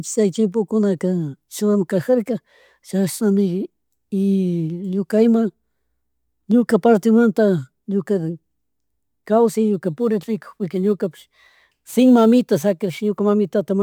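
From 9.74 to 13.08 s, the speech goes through a crude rate conversion that simply picks the nearest sample with no filtering, which fits a 48 kHz to 44.1 kHz change. The repeating error sits roughly 35 dB below the signal and adds a gritty, inharmonic fizz that trails the louder, brighter sounds.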